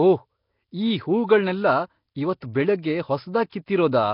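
A short speech recording with heavy coding damage running from start to finish: the sound has a rough, hissy fizz hanging around it and a smeared, underwater blur, which points to Nellymoser compression, likely from a Flash-era microphone path. That codec spends a fixed, small bit budget per block, so quieter bands get nothing and are backfilled with noise, hence the grit. The bitrate sounds to be somewhere near 22 kbps, and there's nothing left above about 5.3 kHz, so it all sounds dull as well.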